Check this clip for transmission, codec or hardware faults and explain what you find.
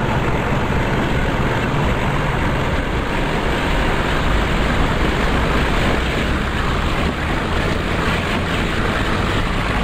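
There's one fault here, a doubled audio track, running from 3.43 s to 5.99 s. A second full-band copy trails the original by about half a second, a few dB quieter, with no reverb tail. It cuts in and out abruptly, likely from a slower capture path or a misaligned edit.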